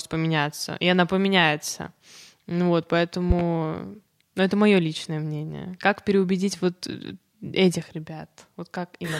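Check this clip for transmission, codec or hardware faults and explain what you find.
There's one fault here, a loud pop at about 3.30 to 3.43 s: two sharp thumps, well above the speech, which carries on underneath. The likely cause is a voltage spike from a plug, switch or static.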